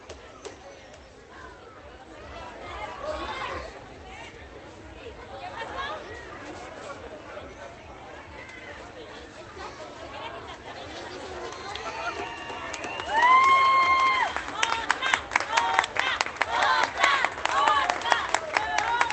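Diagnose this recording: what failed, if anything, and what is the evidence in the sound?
Nothing in this recording of sounds points to a failure at any stage of the chain. It went through a WebRTC call path with an Opus codec, and the top of the spectrum stops at about 8 kHz, which fits the bandwidth that codec setting allows.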